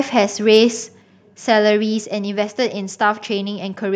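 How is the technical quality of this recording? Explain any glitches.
One brief glitch stands out in the speech. From 0.53 to 0.58 s there is microphone overload. The peaks run about 1 dB past the converter's ceiling, and a small fraction of samples have their tops flattened. The likely cause is input gain set too high. It adds a short, harsh crackle to that loud moment.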